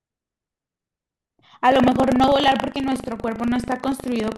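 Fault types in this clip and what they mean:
Buffer tearing: the audio writer and hardware reader overlap each period. From 1.68 s, small slices of stale audio cause a 25 Hz rattle.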